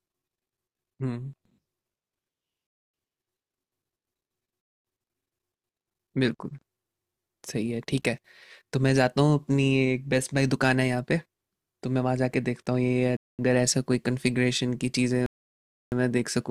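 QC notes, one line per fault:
2.67–2.94 s, 4.61–4.85 s, 13.17–13.39 s and 15.26–15.92 s, Bluetooth stall: the speech drops to dead silence for about a quarter second each time, and about 0.66 s at the end, then carries on. This is likely the headphone buffer running dry while radio interference held packets up.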